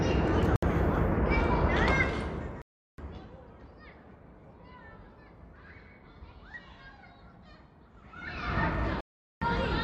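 The recording of everyday sound drops to dead silence three times: for 66 ms at 0.56 s, for 365 ms from 2.62 to 2.98 s, and for 409 ms from 9.01 to 9.42 s. Each gap is most likely a Bluetooth stall. The headphones' buffer ran empty while radio interference delayed packets, and playback resumed once the retransmitted audio arrived. Unlike a click or a codec glitch, each gap is clean silence, and the sound then carries on rather than being smeared or distorted. From 8.04 to 8.60 s there is zipper noise. The level changes by about 25 dB in a couple of hundred abrupt steps per second with no smoothing, so a fine ticking buzz rides on the sound while the level moves.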